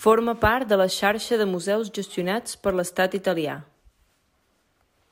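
Throughout the speech, crude rate conversion from 32 kHz to 48 kHz by nearest-sample picking repeats one sample in every three outputs, with no filtering. The periodic error, roughly 25 dB below the speech, is heard as a gritty, inharmonic fizz riding on louder, brighter syllables.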